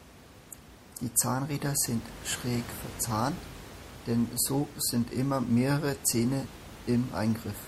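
The likely cause is lossy MP3 encoding at a low bitrate, consistent with something around 64 kbps. Across the whole speech recording, the encoder appears starved of bits. It has let weaker frequency components drop in and out between frames, giving a plainly audible watery, swirling texture. Room noise sits about 17 dB beneath the speech and is part of the original recording.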